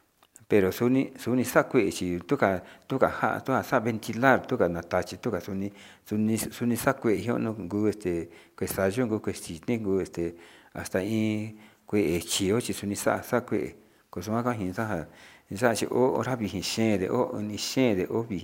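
A careful listen to this speech recording turned up nothing that stood out as a technical problem.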